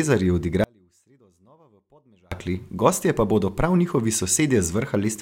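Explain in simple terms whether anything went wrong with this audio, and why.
Something did go wrong. At 0.64 seconds the speech suddenly cuts out, and it comes back just as suddenly at 2.32 seconds. That is an audio dropout to a faint residue. For about 1.7 seconds, only a very faint trace of the sound remains, far quieter than normal. The break is abrupt, not like a natural pause or a fade. The likely cause is a brief loss of the signal while the line after it stayed switched on.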